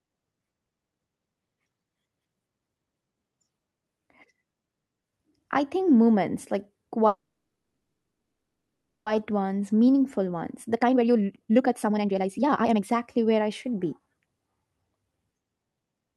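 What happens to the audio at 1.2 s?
Nothing goes wrong at 1.2 s: the speech there carries straight on through the call path without any dropout, glitch or distortion.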